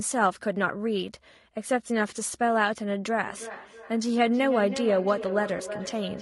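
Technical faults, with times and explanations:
Throughout: low-delay AAC compression. Rough, grainy speech with noise filling the gaps between harmonics, likely from AAC-ELD near 32 kbps. A spectrogram shows smeared harmonics and a thin, synthetic-looking top band.
3.23–6.21 s: feedback echo between two devices. The speech returns about every 0.3 s, up to about 11 dB below the direct sound. The waveform shows evenly spaced repeats trailing each syllable.
5.57–5.61 s: AAC frame loss with concealment. About 20 ms of audio, fitting one lost frame, was rebuilt from the previous spectrum. It shows as a brief smeared, noisy patch across the spectrogram.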